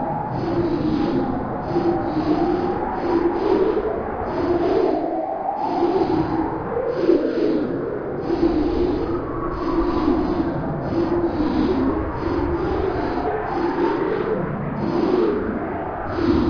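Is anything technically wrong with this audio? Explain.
No, nothing stood out on listening to this sound as a technical problem.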